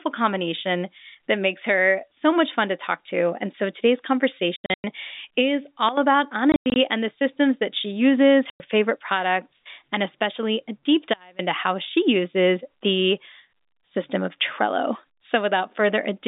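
Packet loss filled with silence first strikes at 4.56 to 4.84 s, right after "so today's": about 220 ms of audio drops out in hard-edged holes scattered across 280 ms, the longest run 100 ms. The gap sizes fit 20 ms packets replaced by digital silence.

A sudden gain jump follows at 5.89 to 5.97 s, where the level falls by about 12 dB in one step, speech and background together. The likely cause is a gain setting applied instantly, with no ramp.

The silence-filled dropouts return at 6.52 to 6.76 s, just before "and the systems that", totalling 160 ms within 240 ms, and again at 8.5 to 8.6 s as one 100 ms hole between "systems that she uses" and "favorite products and especially".

A second gain jump at 11.14 to 11.39 s cuts the level abruptly by about 24 dB, all within the narrow 200 Hz to 3.7 kHz telephone band of the G.711 coding.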